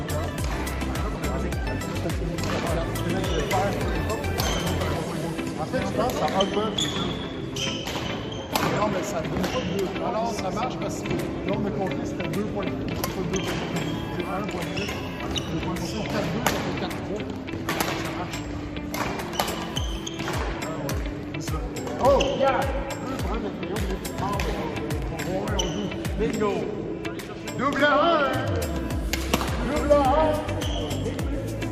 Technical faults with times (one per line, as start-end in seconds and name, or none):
27.77-27.81 chunks out of order